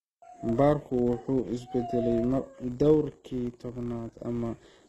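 From the start of the speech to the end, a steady buzz at 100 Hz rides under the signal and rises and falls with its level. It comes from a filter restarted on every block, which drops its state and begins each block from silence. That leaves a small transient at a 100 Hz block rate, consistent with 10 ms blocks.

Across the whole clip the treble also sounds synthetic. Nothing reaches above 12.3 kHz, and s sounds come out gritty and lispy. The cause is likely HE-AAC compression, with upper bands rebuilt from copied lower ones. The plainly audible damage fits a low bitrate around 16 kbps.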